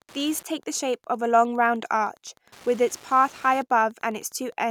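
Wi-Fi interference runs throughout: a nearby radio's beacon, rectified by the circuit, ticks every 102.4 ms, about 30 dB down, as separate clicks, unlike a continuous mains hum.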